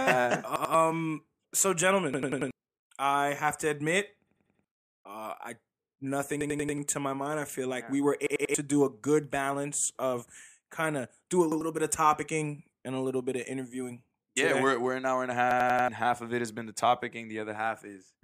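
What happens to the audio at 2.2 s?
A repeated buffer runs from 2.14 to 2.51 s, just before "I have to admit": new audio arrived late, so a roughly 93 ms block, consistent with a 4096-sample buffer, replays four extra times. This produces a stutter with hard joins, and about 0.4 s of audio is lost.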